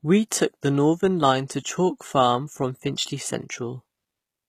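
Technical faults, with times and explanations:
Throughout, HE-AAC compression: the treble sounds rebuilt from lower bands, so s sounds turn gritty and lispy, likely from a very low bitrate around 20 kbps.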